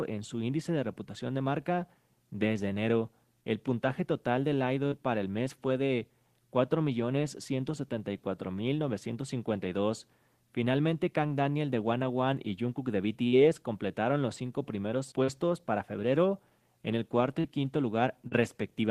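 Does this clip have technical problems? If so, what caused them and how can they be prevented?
Yes: short concealed packet loss at 4.87, 13.28, 15.24, 17.40 and 18.28 s. Each time about 40 ms went missing and was filled by extending the preceding sound, heard as a brief smear or wobble. On a spectrogram each shows as a short stretch of repeated or blurred texture. Preventing it needs a steadier network path or a larger jitter buffer, so late packets still arrive in time.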